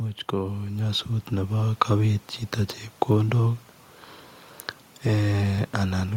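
From 0.3 s to 1.85 s the level climbs steadily by about 6 dB, the sign of automatic gain rising. The gain control judged the incoming speech too quiet and raised its gain over roughly a second and a half, so the talker and the room noise swell together rather than the voice alone getting louder. The result is a slow fade-up that lifts the background along with the speech.

From 2.59 s to 6.09 s there are periodic USB or driver dropouts: brief losses repeating every 0.5 s, about seven in all. Each gap is around a millisecond, and the missing audio is skipped rather than replaced with silence, so the waveform jumps abruptly across the gap. This points to a background task stalling the USB bus or audio driver at a fixed interval. It is heard as a regular ticking that sounds only while speech is present.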